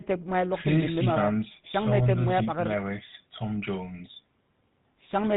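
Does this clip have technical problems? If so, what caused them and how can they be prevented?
Yes. GSM full-rate codec, throughout: a vocal-tract model driven by sparse regular pulses gives the speech buzzy roughness and cuts everything above 4 kHz, consistent with 13 kbps. Prevent it by recording or transmitting through a wideband or higher-bitrate path instead of a GSM phone link.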